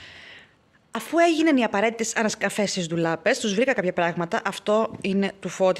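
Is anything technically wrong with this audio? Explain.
Yes. Dropped buffer (overrun) at 0.95 s and 3.04 s, where the sound jumps ahead by roughly 20 ms and a few milliseconds, likely from unread samples being overwritten.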